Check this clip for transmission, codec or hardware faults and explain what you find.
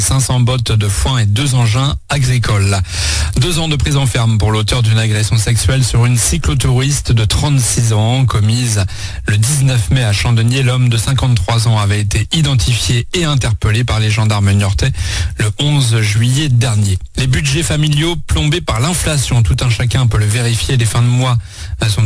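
Aliasing is present throughout the clip. The sound was resampled without an anti-alias filter, fitting a drop to 22 kHz. Content above 11 kHz folds back as gritty, metallic tones, roughly 20 dB quieter than the signal.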